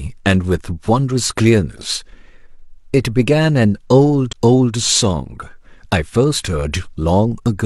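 Speech, with one fault: damaged data in a compressed stream between 4.28 and 4.34 s. Corrupted bytes there make the decoder misread roughly 60 ms of frames and lose sync until it finds the next valid frame header, heard as a short chirp, squawk, click or hole.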